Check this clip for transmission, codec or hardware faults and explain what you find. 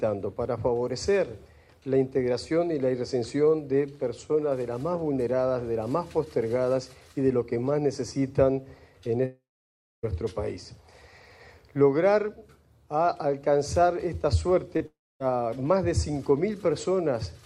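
Three transmission faults are audible: two long network dropouts and one short concealed packet loss, all in the second half of the clip.

Long network dropout, 9.25 to 10.05 s and 14.86 to 15.22 s. In each, the last sound is briefly stretched into a fading buzz or hiss, then the audio goes silent for about 0.62 s and about 0.26 s respectively before resuming further on. About 0.78 s and 0.34 s of material are gone. The likely cause is a run of packets that never arrived, with the receiver's concealment giving up once the gap outlasted what it could plausibly extend.

Short concealed packet loss, 14.77 to 14.82 s. Roughly 40 ms of audio failed to reach the decoder in time. The receiver bridged the hole by extrapolating the preceding signal for about 32 ms and cross-fading back into the real stream. It is heard as a brief smear or wobble just before the second dropout.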